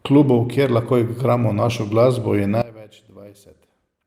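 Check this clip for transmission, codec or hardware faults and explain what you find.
One fault is present. From 2.62 s to the end, the speech collapses by about 20 dB and what remains is only a faint copy of it. The likely cause is one channel inverted: with one stereo side's polarity reversed, the centred voice cancels when the channels are summed to mono, leaving only their small difference. Unlike a plain gain drop or dropout, the residue isn't just quieter or silent; it's a weak ghost of the voice.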